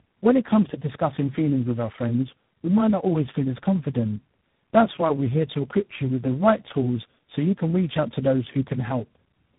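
Throughout the speech, tandem speech coding is audible: the signal sounds like it has passed through about three low-rate speech coders in succession, which fits a path such as GSM full rate, then G.729A, then G.726, with transcoding at each link border. Each coder models the previous one's errors as if they were speech, so distortion compounds. The result is rough, warbly, muffled speech with nothing above 3.8 kHz.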